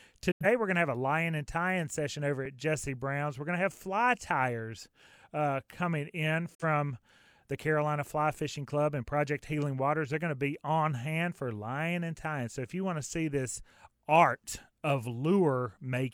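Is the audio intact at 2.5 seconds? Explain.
No. At 2.45 s there is an underrun with held sample. The output buffer ran dry, and the converter froze on its last value for about 2.7 ms, which fits a 128-sample buffer. The speech flattens briefly with little click. Nothing is lost, so it resumes softly where it stopped.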